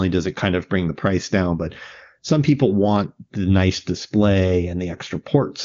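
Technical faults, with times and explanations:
Nothing faulty is audible anywhere in this speech recording.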